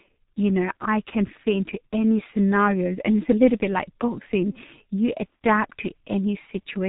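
From start to end the speech has passed through the G.723.1 codec, a low-rate telephony coder working in 30 ms frames and refreshing its model of the voice only slowly. The damage is heavy, which fits a rate around 6 kbit/s. Nothing survives above 3.8 kHz, so the speech sounds muffled and boxy. The sluggish model gives the voice a hoarse, buzzy texture and smears consonants into one another.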